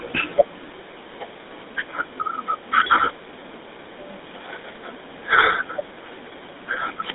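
From start to finish the speech carries the GSM full-rate codec's signature. The vocal tract is modelled and driven by regularly spaced pulses built from only every third excitation sample, giving a buzzy, gravelly roughness that fits a 13 kbps GSM stream. Content runs roughly 250 Hz to 3.7 kHz, with nothing above 3.8 kHz. Unlike a plain band-limited line, which stays clean, this adds grit to the voice itself.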